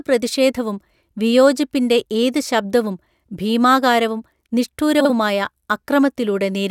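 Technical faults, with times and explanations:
5.00–5.11 s, frames out of order: Two neighbouring blocks of sound, each about 46 ms long, play in swapped order. The later block comes first. This gives a brief garbled flutter. No time is lost.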